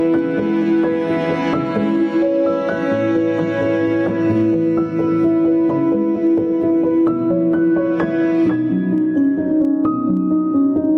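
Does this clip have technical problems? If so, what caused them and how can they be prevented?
Yes. Gain pumping runs throughout. The gain ducks by roughly 10 dB under each loud sound. This is likely from input gain set far too high feeding a fast limiter. To prevent it, lower the input gain and use slower, gentler limiting.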